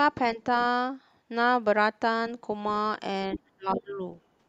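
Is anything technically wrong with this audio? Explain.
Yes, there are two kinds of fault in this speech clip.

Other side's voice leaking through, at 0.60 to 0.65 s and again at 3.33 to 3.38 s: the far end's voice likely played from the talker's loudspeaker into the microphone without being fully cancelled. Each leak is a brief scrap, faint the first time, about 25 dB below the speech, and much louder the second, about 10 dB down.

Speech suppressed in double talk, from 3.29 to 3.99 s: with both sides likely talking at once, the echo canceller could not tell the talker from the loudspeaker echo and pulled everything down. The talker's voice dips by as much as about 25 dB, for roughly half a second in all.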